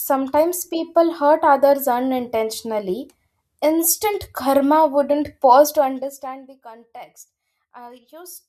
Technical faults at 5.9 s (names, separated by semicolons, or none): zipper noise